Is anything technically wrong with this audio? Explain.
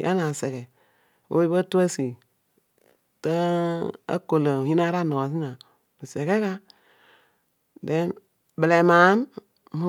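No, nothing technically wrong turns up in this speech recording, so there's nothing here to flag.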